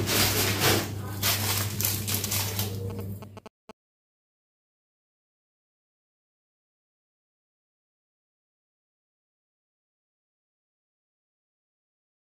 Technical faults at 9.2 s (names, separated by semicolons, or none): none